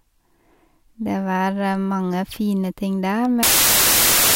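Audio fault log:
3.43 to 4.35 s, samples built from the wrong bytes: the speech gives way to a loud burst of harsh broadband noise that lasts to the end of the clip. From this point the bytes of each sample are assembled wrongly, whether shifted by one byte, in swapped order or on a mistaken alignment. The rapidly changing low-order bits therefore land in the most significant position and dominate every value, so the signal turns into noise.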